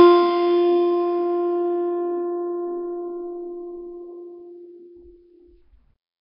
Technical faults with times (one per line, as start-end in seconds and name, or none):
0.00-6.21 Nellymoser compression